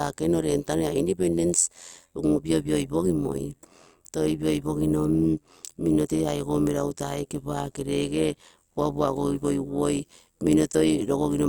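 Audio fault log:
throughout overlap-add ripple: frames were windowed and rejoined with an overlap that never sums to constant gain, so level dips by about 11 dB around 100 times a second, giving a metallic buzz.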